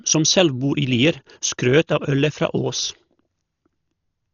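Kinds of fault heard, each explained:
Dolby Digital compression: heavy damage throughout, with nothing above 7 kHz, so the speech sounds dull, and a rough fluttering noise clings to the voiced sounds. It's likely AC-3 coding starved of bits, fitting around 40 kbps, where empty frequency lines get filled with noise.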